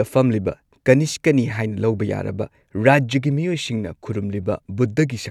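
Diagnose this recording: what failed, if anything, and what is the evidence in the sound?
Nothing has failed at any stage of the chain that can be heard here. The speech comes through without any audible fault, so there is no evidence to place against a stage or a mechanism.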